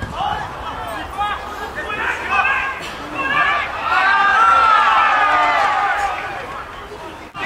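Computer activity noise runs the whole way through: load swings disturb the shared ground, leaving pulsing around 70 Hz, roughly 35 dB below the sound, rising and falling with the machine's activity.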